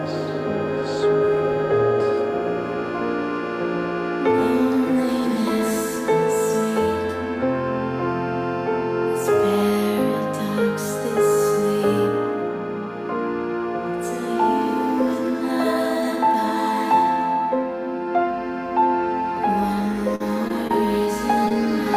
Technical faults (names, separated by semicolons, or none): short concealed packet loss